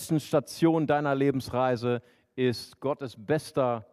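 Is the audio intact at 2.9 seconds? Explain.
Yes, the audio at 2.9 seconds is intact, with nothing to be heard there that departs from the surrounding sound.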